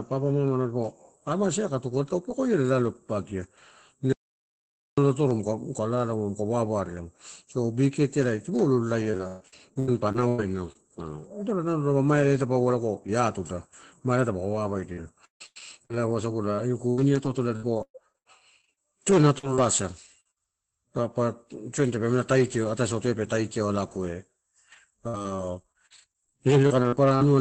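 Speech over a call line, top end capped around 8 kHz, which fits Opus at roughly 20 kbps. From 4.13 to 4.98 s the audio drops dead to silence for about 0.85 s, with no room tone; an audio dropout to silence, likely the input cutting out while the recorder kept writing silence. Then come four bouts of repeated packet loss with that choppy, robotic sound, at 9.01 to 10.77 s, 14.53 to 15.93 s, 16.56 to 19.58 s and 25.08 to 27.23 s. Each has a string of short holes patched by stretching the last sound, with the longest single gap at 130, 150, 117 and 50 ms respectively, and chunks of the speech simply gone. At 20.20 to 20.27 s there's a short concealed packet loss, a quick smear where about 45 ms was filled in from the preceding sound. Right after it, from 20.31 to 20.38 s, a small burst of packet loss drops about 60 ms, heard as a held, fading continuation before the speech picks up again a bit further on.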